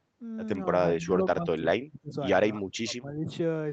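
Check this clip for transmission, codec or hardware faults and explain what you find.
One fault stands out: the speech is pushed down twice, most likely speech suppressed in double talk. The first dip runs from 0.98 to 2.17 s and the second from 2.59 to 3.30 s. Each lasts most of its span, about a second and under a second. The level falls by up to about 30 dB, then about 25 dB. The echo canceller apparently mistook this talker for loudspeaker echo while the far side was talking. It then attenuated everything. The speech sinks. The upper band ends near 8 kHz, as expected on this call path.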